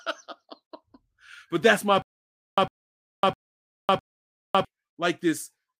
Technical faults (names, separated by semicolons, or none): stutter with silent gaps